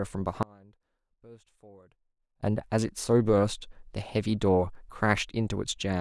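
An audio dropout to a faint residue runs from 0.43 s to 2.43 s, cutting out the speech abruptly for about 2.0 s before it snaps back mid-flow. The break is not a pause or a fade. Through the gap only a faint sound remains, roughly 25 dB below the speech's normal level. That points to the wanted feed being lost while the path downstream stayed live, likely through an interruption at the source or link.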